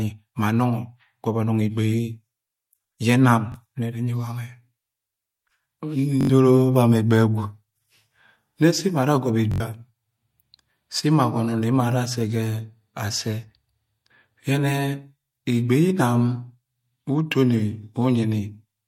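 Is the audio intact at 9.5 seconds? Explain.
No. From 9.52 to 9.60 s, new audio arrived late, so the device replayed its last buffer of roughly 21 ms (fitting a 1024-sample buffer) four extra times. This repeated buffer is heard as a hard-edged stutter in the speech, and about a tenth of a second of audio is lost.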